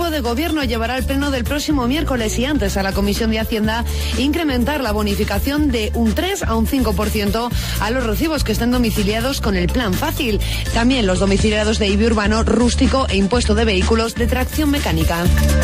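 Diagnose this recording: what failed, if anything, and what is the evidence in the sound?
A hybrid radio receiver lost its digital stream and cross-faded to the FM analogue broadcast at 10.58 s, returning at 14.21 s: digital radio blending to analogue. Each blend takes about 0.2 s; during FM, hiss sits roughly 35 dB down, and level shifts about 2 dB.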